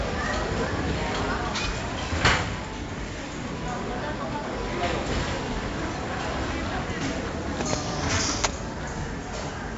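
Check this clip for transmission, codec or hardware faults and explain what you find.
One codec fault runs through the whole clip: 4-bit ADPCM compression. Each sample is coded as a coarse 4-bit step from a prediction, so heavy gritty hiss rides on every loud passage and sharp attacks distort. Nothing sounds above about 7.7 kHz, which fits a 16 kHz rate at 64 kbps. Unlike steady tape hiss, this noise tracks the signal's level, and it lacks the swirly artefacts of MP3-style codecs.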